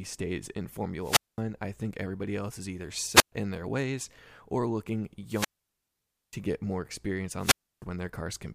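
Wireless microphone squelch dropouts at 0.99 to 1.41 s, 3.11 to 3.32 s, 5.29 to 6.37 s and 7.37 to 7.85 s: the radio link fades, hiss rises, then the receiver's squelch mutes the speech for about 0.21, 0.12, 0.89 and 0.31 s before it returns.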